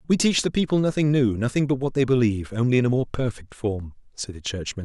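No technical faults occur at any point in this recording.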